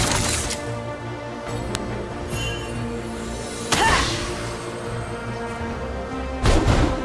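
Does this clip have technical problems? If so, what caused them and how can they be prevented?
Yes. At 1.75 s a sharp, loud snap marks a file header played as audio: a new WAV piece was joined with its header bytes intact, decoded as samples. It appears as a tall spike in the waveform and a full-height vertical line in the spectrogram. Strip the headers from each piece before joining.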